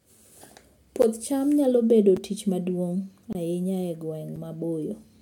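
Speech with four blocks of digital silence, at 1.02 s, 2.17 s, 3.33 to 3.35 s and 4.36 s. Each is a hard cut lasting 6 to 23 ms. The sizes suggest unfilled output buffers of 256 to 1024 samples.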